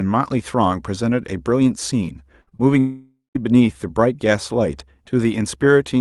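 It's speech carried over a call path that sounds like Opus, with the top end rolling off around 12 kHz. At 2.41 to 2.49 s there's a burst of packet loss: the receiver stretches the last sound and fades it out for about 55 ms, and roughly 60 ms of audio is simply gone. Right after that, two short concealed packet losses at 2.49 to 2.53 s and 2.57 to 2.61 s each smear about 20 ms into a quick wobble where the real audio never arrived. Then at 2.79 to 3.37 s there's a long dropout, likely a network dropout. The concealment drags on as a fading buzz or hiss for over half a second and ends in about 150 ms of silence, so roughly 560 ms of speech is missing when the audio picks back up.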